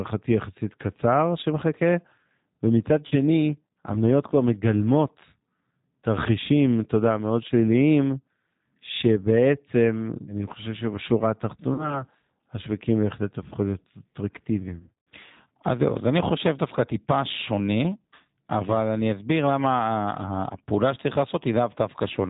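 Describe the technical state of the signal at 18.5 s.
At 18.5 s the speech carries G.729 codec damage, present across the whole clip. Pulse-coded, band-limited rebuilding below 4 kHz sounds plainly rough and synthetic, fitting roughly 8 kbit/s.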